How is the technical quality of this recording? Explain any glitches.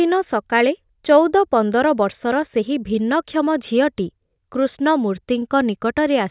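No technical faults are audible anywhere in the recording, so there are no glitches to explain.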